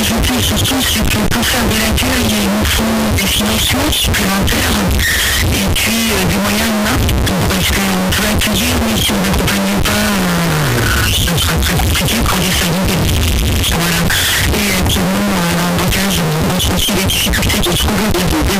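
The whole clip is buried under a very loud, harsh distortion, and the quiet stretches come out as loud as everything else. That points to signed and unsigned mixed up, likely a 16-bit sample-format mismatch: the flipped top bit turns every zero crossing into a full-range jump.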